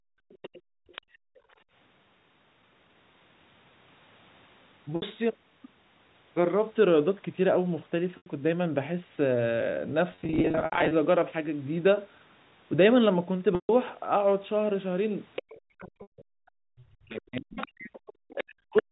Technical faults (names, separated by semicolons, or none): background gated by the echo canceller; other side's voice leaking through; packet loss with pitch repetition; speech suppressed in double talk